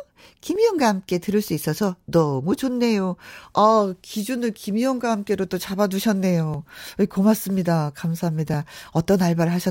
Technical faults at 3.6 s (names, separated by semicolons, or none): periodic USB or driver dropouts